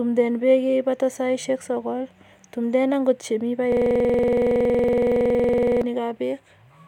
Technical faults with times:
3.72-5.82 system hang loop

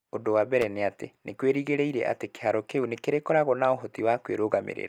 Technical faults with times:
0.61-0.64 loose connector crackle

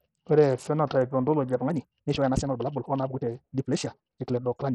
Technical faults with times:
0.00-4.74 Bluetooth SBC compression
1.53-4.74 time-stretched section

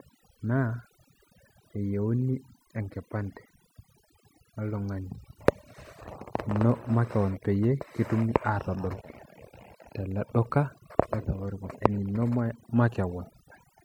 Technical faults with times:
0.00-13.85 overdone noise removal

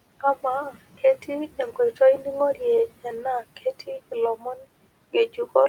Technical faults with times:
4.36-4.63 speech cut by the noise suppressor

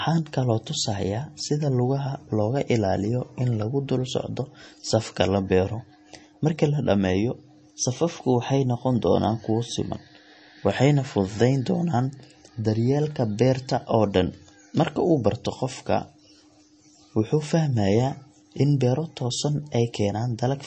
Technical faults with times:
0.00-20.67 MP3 compression

